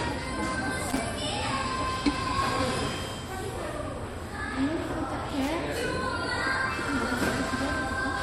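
A short, irregular burst of scratchy crackle cuts into the sound from 0.90 to 0.98 s, and a longer one from 5.30 to 5.49 s. This is loose connector crackle: a worn or dirty contact flickering between connected and open, chopping the signal into ragged fragments.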